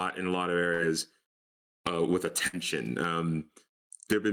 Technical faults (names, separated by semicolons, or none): gain pumping; burst of packet loss